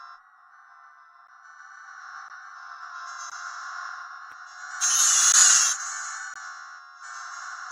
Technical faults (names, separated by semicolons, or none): gap between stream segments